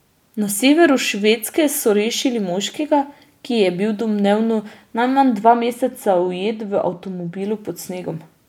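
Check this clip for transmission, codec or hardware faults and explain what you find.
There's one fault in the speech, from 5.42 to 7.42 s, right after "je bil domnevno najmanj": de-emphasis applied wrongly. A treble-cut filter hit audio that didn't need it, tilting the top end down about 8 dB at 10 kHz relative to 1 kHz, so that stretch turns dull and muffled.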